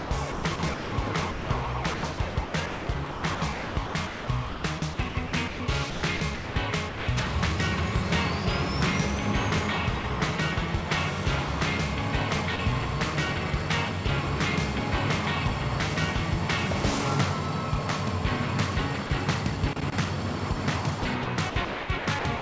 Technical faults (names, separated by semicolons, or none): sound chopped by the voice detector; sound dropped by the voice detector; loose connector crackle